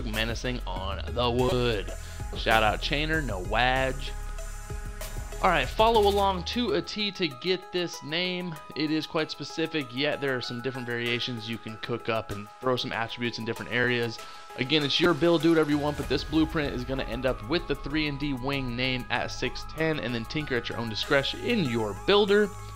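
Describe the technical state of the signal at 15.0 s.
Damaged data in a compressed stream occurs from 15.02 to 15.06 s. Corrupted bytes in the encoded frames there cause the decoder to misread them, lose sync and hunt for the next valid frame header, producing a brief blip or chirp lasting about 36 ms.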